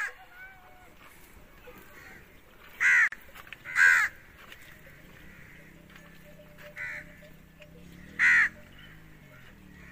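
At 3.08 s the sound drops out for about 45 ms, ending at 3.12 s, with smeared edges, then resumes exactly where it stopped. This is a gap at a join of encoded pieces: separately encoded sections were butted together with their encoder start delay and final-frame padding left untrimmed.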